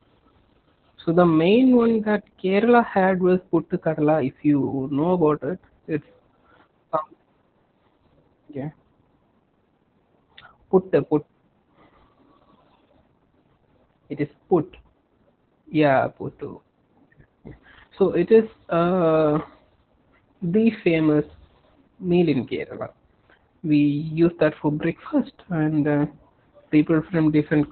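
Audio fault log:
throughout: Opus voice compression; speech sounds muffled, hoarse and slightly robotic, with nothing above 4.4 kHz, which fits narrowband SILK coding near 8 kbps.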